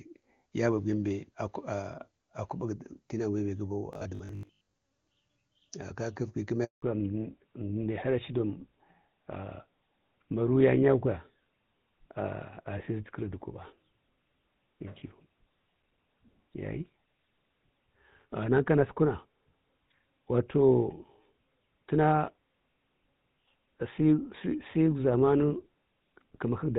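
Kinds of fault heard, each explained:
Robotic sound from repeated short buffers: Just after "tenau bembe", from 3.93 to 4.75 s, the sound turns into a rigid metallic buzz at 50 Hz. The likely cause is a 20 ms chunk of audio being replayed while new audio arrived too slowly. Roughly half the material is repeats.
Handover gap: At 6.64 s the sound fades out and stays silent for 180 ms. This fits the call switching networks with no frames getting through during the move. Whatever happened in that stretch is lost entirely.
Fallback to narrowband: Right after the gap, from 6.82 s to the end, nothing remains above 4 kHz. The sound is duller and rougher than the clear HD Voice before it. This points to a drop from AMR-WB to an older codec such as GSM full rate.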